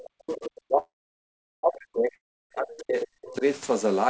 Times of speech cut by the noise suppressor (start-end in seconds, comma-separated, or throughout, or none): none